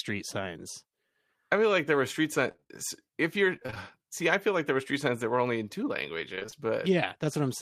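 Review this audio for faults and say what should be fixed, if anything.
Repeated packet loss (robotic sound) occurs at 2.51–2.71 s after "like there were street", 3.56–3.78 s before "see I feel like", and 6.35–6.68 s after "were only in two". Gaps up to 27 ms are filled by extending preceding audio, covering nearly half of each stretch and making it choppy with pieces missing. A larger jitter buffer with forward error correction would prevent this.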